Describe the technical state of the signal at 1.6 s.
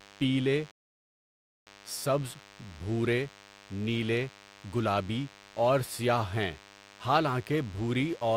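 At 1.6 s the audio is inside a rebuffering stall that runs from 0.71 s to 1.67 s. The player ran out of downloaded data and stopped playback. The speech cuts to silence and then picks up exactly where it left off at 1.67 s. No speech is lost. Instead, about 0.95 s of dead air is inserted into the timeline, stretching the clip.

A DECT cordless phone buzz is also present throughout the clip. It sits about 25 dB below the speech. A nearby DECT handset or base transmits a short radio burst every 10 ms, and the audio circuitry rectifies it. The result is a steady, thin buzz at 100 Hz. Its many harmonics give it a wiry, edgy texture rather than a smooth hum.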